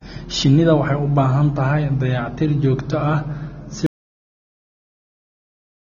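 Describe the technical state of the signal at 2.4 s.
At 2.4 s the speech carries AAC compression, present throughout. Nothing sounds above 6.9 kHz. The dull, smeared, fizzy sibilants likely come from AAC-LC at roughly 24 kbps.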